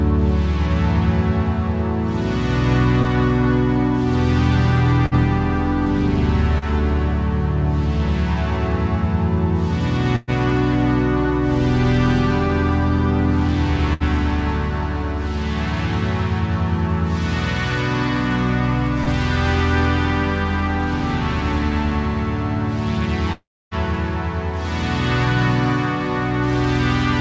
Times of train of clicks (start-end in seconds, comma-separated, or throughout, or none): none